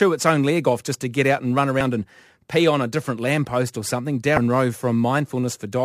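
At 1.78 to 1.81 s and again at 4.35 to 4.38 s, the speech is interrupted by a short blip of about 30 ms from damaged data in a compressed stream: corrupted bytes make the decoder misread frames and lose sync until it finds the next valid header.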